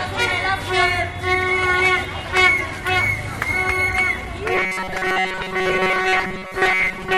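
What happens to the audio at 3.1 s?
Nothing goes wrong at 3.1 s; the sound carries straight through that moment with no dropout, click, glitch or other fault.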